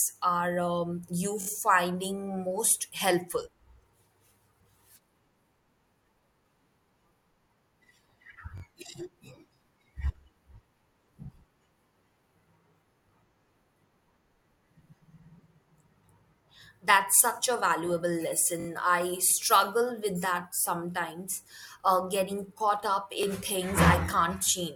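Repeated buffer stutters occur at 1.41–1.47 s (after "are um you"), 8.58–8.62 s, 18.60–18.67 s (after "such a valuable") and 23.23–23.25 s (after "uh getting caught up"). Audio arrived late, so the same 21.33 ms chunk, which fits a 1024-sample buffer, replays with hard joins, heard as brief stutters.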